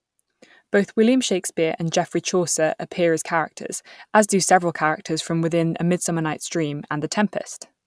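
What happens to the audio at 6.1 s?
Nothing goes wrong at 6.1 s; the speech plays through that moment intact, with no dropout, click or distortion.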